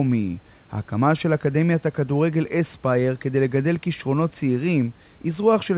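From 1.51 s to the end, a fine hiss roughens the speech, strongest on loud, bright sounds and absent in pauses. This is sample clock jitter: the converter's clock wanders by a few microseconds, mistiming samples and leaving error roughly 30 dB below the signal.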